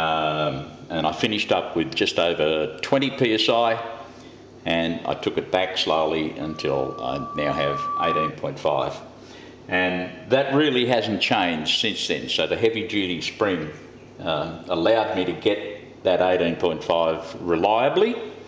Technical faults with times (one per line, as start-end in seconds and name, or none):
6.41-8.34 loudspeaker feedback squeal